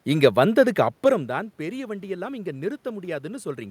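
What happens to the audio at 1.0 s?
Nothing goes wrong at 1.0 s: the speech comes through intact, with only the room's own background noise underneath it.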